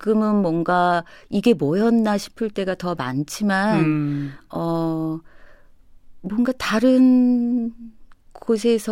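No technical faults can be heard anywhere in the speech.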